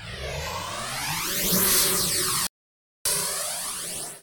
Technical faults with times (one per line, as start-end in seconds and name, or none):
2.47-3.05 playback stall